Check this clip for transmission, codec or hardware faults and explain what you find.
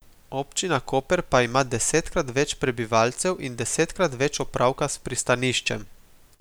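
No faults can be heard anywhere in this speech recording.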